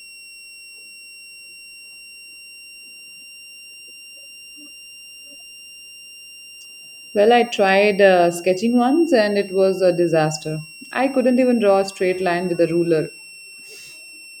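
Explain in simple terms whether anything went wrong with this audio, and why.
A switching power supply feeding the equipment is cycling in an audible burst mode or beating with another one, causing a switching supply whistle. For the whole speech clip, a thin, high whistle sits behind the sound, drifting between about 2.7 and 2.8 kHz.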